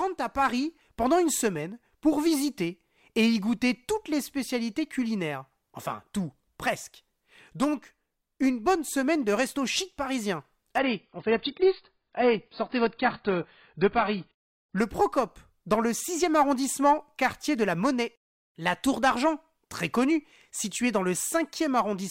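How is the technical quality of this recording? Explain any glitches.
The recording has one clear glitch, a stretch where the stream dropped to a lower bitrate. From 10.78 to 14.78 s, a 4 s span, the adaptive stream switches without any gap to a lower-bitrate version that fits roughly a fall from 96 to 16 kbit/s. Everything above 5.1 kHz disappears, so the speech turns dull. A spectrogram shows a sudden flat ceiling there, while the waveform stays unbroken.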